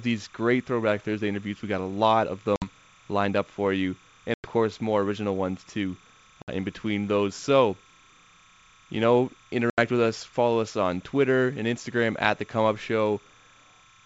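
A faint chirping warble runs under the speech from start to finish. This is timecode bleed. Linear timecode from a nearby track or cable has leaked into the audio path. The code is a square wave that flips between two pitches, near 1 and 2 kHz. Its rhythm fits 30 frames per second. It sits about 30 dB below the speech, steady and mechanical.

Packet loss on an ADPCM call then cuts four hard-edged holes. They fall at 2.56 s, 4.34 s, 6.42 s and 9.70 s. They last 60, 100, 60 and 80 ms. Their lengths point to roughly three to five lost packets each. Silence fills each gap. The decoder's predictor and step size lose track of the sender's, so the speech returns slightly distorted. It settles within tens of milliseconds. The wideband telephone coding itself is clean.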